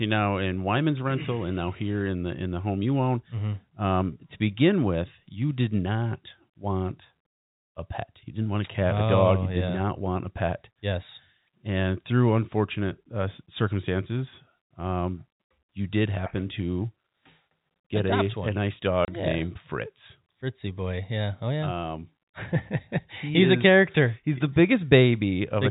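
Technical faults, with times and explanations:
19.05–19.08 s, packet loss filled with silence: after "get a a nice" the speech drops out for 30 ms, which fits one lost 30 ms packet replaced by silence, before "yeah named" resumes. The waveform shows a flat gap with abrupt edges, and the spectrogram a blank vertical strip.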